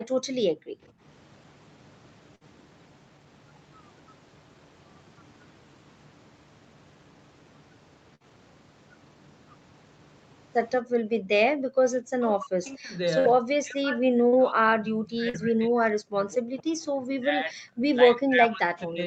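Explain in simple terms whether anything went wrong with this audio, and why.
Several things went wrong, all typical of a call.

At the very start, from 0.03 to 0.27 s and again from 0.49 to 1.02 s, the background was gated by the echo canceller. The room sound briefly drops away while the loudspeaker plays.

There are four bursts of packet loss, at 2.35, 8.15, 13.20 and 14.28 s. Each time a short stretch of audio is missing. The gap is filled by stretching out the last sound, which fades before the audio jumps ahead.

The speech dips or cuts out in pieces from 11.14 to 11.67 s, 11.89 to 12.95 s, 13.40 to 17.83 s, and from 18.03 s to the end. This is likely speech suppressed in double talk. The echo canceller turned this talker down while the other side spoke.

At 15.29 to 15.36 s there is a short concealed packet loss. A tiny piece never arrived and was patched over, leaving a brief smear.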